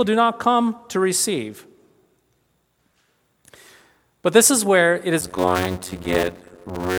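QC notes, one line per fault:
5.21–6.99 s, block size mismatch (padded): From 5.21 s to the end, the speech slows to about 0.53 times normal speed but keeps roughly its normal pitch. A buzz at about 92 Hz sits under it. One stage writes short blocks into longer reads, and the rest of each block is filled with silence. That fits 256-sample writes into reads of about 480. The repeating gap makes the buzz and stretches the timing.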